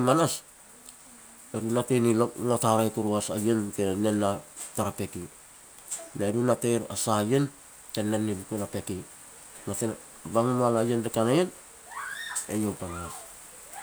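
No technical fault can be heard anywhere in this speech recording, and the signal stays steady and intact throughout.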